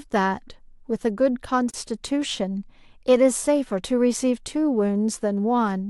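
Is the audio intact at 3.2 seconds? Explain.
Yes, the speech is intact at 3.2 seconds, with no dropout, glitch or other fault at that moment.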